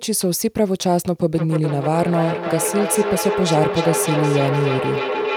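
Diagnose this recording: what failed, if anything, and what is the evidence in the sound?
A feedback howl fails at the call-processing stage, where two devices in the same room share one call. From 1.34 s a tone near 400 Hz grows instead of decaying, pulsing roughly every 0.3 s as the sound travels the loop, and it climbs to about 4 dB below the speech level. It continues to the end of the clip. Each trip from loudspeaker back into a microphone adds gain, so the loop keeps reinforcing the band it favours.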